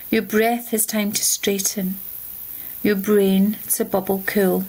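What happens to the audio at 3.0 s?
At 3.0 s the sound is caught in gain pumping that runs through the whole clip. The level swings by roughly 15 dB, leaving loud and soft parts squashed close together. The likely cause is gain set far too high, so a fast limiter or compressor clamps down on each peak and releases in between. Unlike a noise gate, gain pumping does not cut quiet parts to silence.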